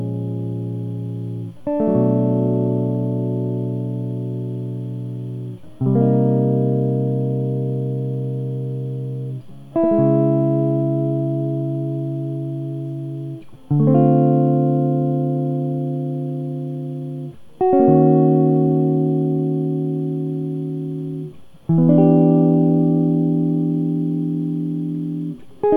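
Nothing technically wrong turns up anywhere in this music clip, so there's no fault to point to at any moment.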